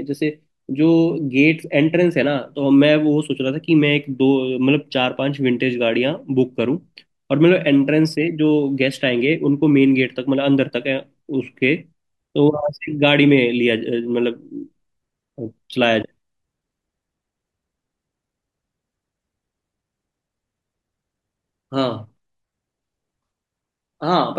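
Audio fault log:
Nothing stood out on listening to this speech recording.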